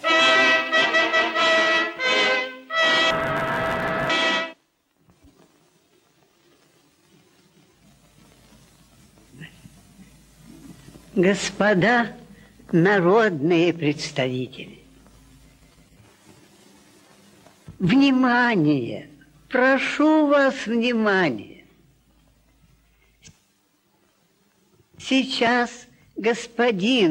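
From 3.11 to 4.11 s, interleaved audio read as planar splits each 10.88 ms block into halves, leaving the sound dull, robotic and buzzing near 92 Hz.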